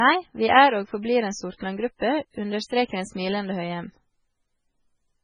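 Throughout, the speech shows heavy MP3 compression, likely at a very low bitrate near 16 kbps: nothing above 10.5 kHz, watery swirling, metallic s sounds and smeared attacks.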